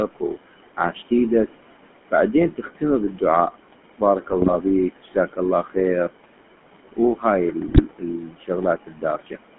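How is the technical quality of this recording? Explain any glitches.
The technical quality is poor. Two faults run through the whole recording: a noise suppressor that pumps the background, and the gritty sound of a GSM full-rate codec. On top of these, speech is clipped away in four places, and two short bursts of GSM bit errors break the voice apart.

Noise suppressor artifacts are present throughout. The suppressor estimates which frequency bands hold steady noise and pulls them down, by about 18 dB at its deepest, frame by frame. The room noise sits about 14 dB below the speech. Between phrases it sinks, then it rises again under each word. On a spectrogram the noise floor appears as a mottled, blotchy texture that switches on and off in time with the speech, not as an even grey haze.

The GSM full-rate codec is also present throughout, and its damage is plainly audible. The sound has the buzzy, gravelly roughness of this codec, which fits the 13 kbps full-rate scheme. 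It models the vocal tract and excites it with a coarse, sparsely sampled pulse train, and that gives the voice its grainy edge. The usable band is roughly 200 Hz to 3.4 kHz. On a spectrogram the energy stops sharply near 3.4 kHz and the bottom is thin. Harmonics look smeared and grainy instead of forming clean stripes.

Speech cut by the noise suppressor occurs at 0.08 to 0.38 s, 3.98 to 5.77 s, 6.92 to 8.5 s and 8.82 to 9.38 s. The suppressor mistook parts of the speech for noise and turned them down with the background, by about 16 to 19 dB at the worst moments. The longest stretch is from 6.92 s, where well over half a second of sound is affected. Soft consonants and word tails sound swallowed or faint. The waveform shows sudden dips in the envelope, and the spectrogram shows speech energy fading into gaps.

GSM bit errors occur at 4.30 to 4.56 s and 7.68 to 7.82 s. On a weak radio link, corrupted bits reached the decoder. 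The damaged filter, pitch and gain values bend the spectrum or spike the level for a frame at a time. The first burst fits roughly a dozen damaged 20 ms frames. The voice breaks into squawks, pops and gargling. The waveform shows abrupt level jumps, and the spectrogram shows blocky, misplaced smears of energy.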